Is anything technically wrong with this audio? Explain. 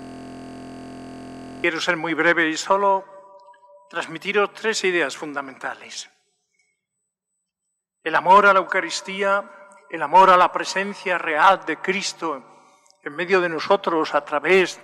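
Yes. A system hang loop is already under way at the start and lasts until 1.64 s. The system stalled while the hardware kept replaying one 23.22 ms slice of its ring buffer, which fits a 1024-sample buffer. Repeating at 43.1 Hz, it sounds like a steady buzz.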